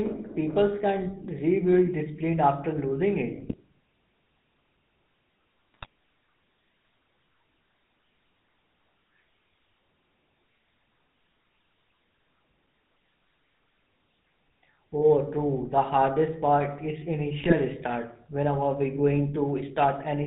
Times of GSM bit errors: 3.40-3.54, 5.74-5.86, 17.40-17.53

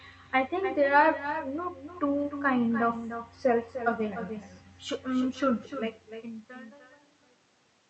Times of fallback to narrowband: none

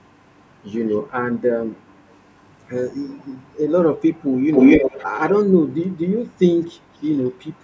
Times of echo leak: 0.03-0.71, 1.69-2.17, 3.04-3.59, 4.31-7.63

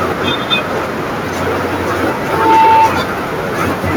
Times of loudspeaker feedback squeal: 2.21-2.92

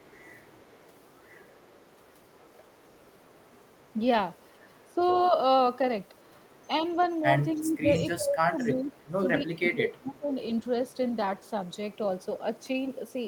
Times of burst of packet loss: none

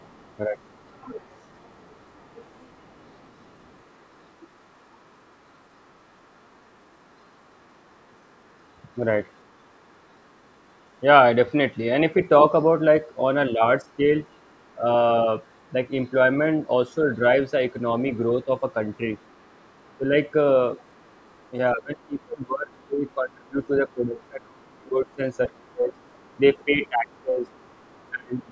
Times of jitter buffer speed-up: none

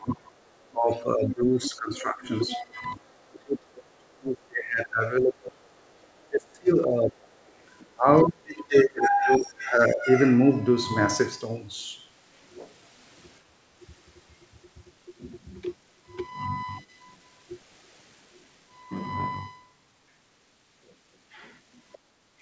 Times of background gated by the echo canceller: 13.45-13.81, 21.98-22.32

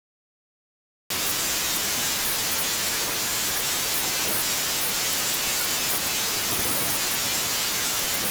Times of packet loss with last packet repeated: none

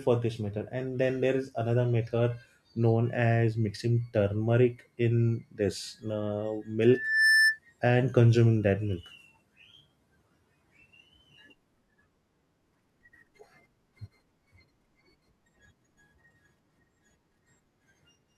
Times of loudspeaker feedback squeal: 6.86-7.59

